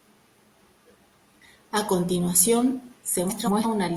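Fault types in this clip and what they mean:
Frames out of order: two adjacent runs of coded frames reached the decoder swapped and were played back in that order, so a short stretch of speech has its two halves exchanged. It happens at 0.61 to 0.96 s and again at 3.27 to 3.66 s. Each swapped half lasts about 0.17 s, which fits runs of four frames. Each passage sounds like a garbled flutter, and no time goes missing.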